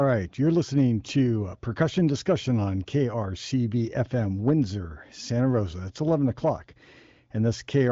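No technical faults can be heard anywhere in this speech. It carries the band-limited character of an AMR wideband (HD Voice) connection: no content above 7.5 kHz, and the coding sits at a rate high enough (18.25 kbit/s) that the speech stays clear rather than rough.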